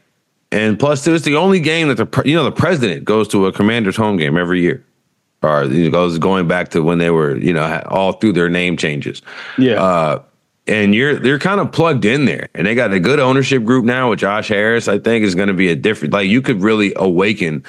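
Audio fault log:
Throughout: gain pumping, the level ducking by around 10 dB under louder speech, likely from excessive gain driving a fast limiter.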